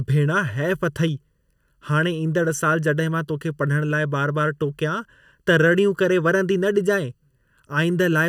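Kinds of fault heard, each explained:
Channel delay (comb filtering): One channel arrives about 0.7 ms behind the other, and the two are summed to mono. Shared content cancels at evenly spaced frequencies, starting around 700 Hz. The speech sounds hollow and phasey throughout, with fixed spectral notches.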